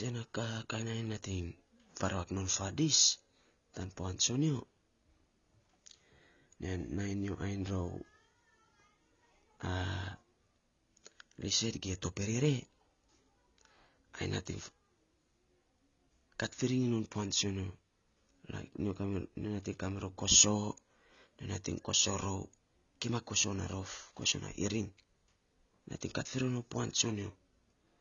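From start to finish the speech is band-limited, with nothing above 6.9 kHz, so it sounds dull and lacks air and crispness. Sibilants and sustained vowels carry a plainly audible smeared, warbling texture. The likely cause is AAC compression at a low bitrate, consistent with AAC-LC near 24 kbps: with so few bits per frame, the encoder drops the upper band and quantises the remaining spectral lines coarsely.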